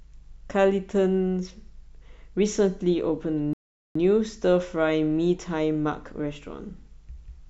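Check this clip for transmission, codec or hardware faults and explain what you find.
One transmission fault is present. Rebuffering stall at 3.53 s: the player exhausted its downloaded audio, so the speech falls silent for 0.42 s, then resumes exactly where it stopped.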